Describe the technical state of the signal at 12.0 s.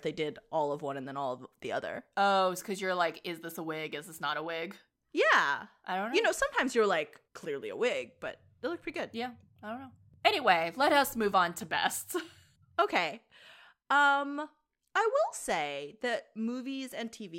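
At 12.0 s the speech signal is intact, with no dropout, distortion, clipping or other technical fault present at that moment.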